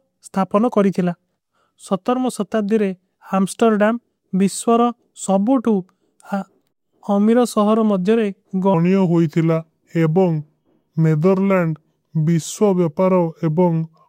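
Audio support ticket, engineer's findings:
Section at the wrong speed, 8.74 s to end (14.09 s): speech slows to 0.83x and pitch drops about three semitones, sounding deep and dragged. Speed and pitch move together, likely from playback or editing running that segment on a mismatched clock.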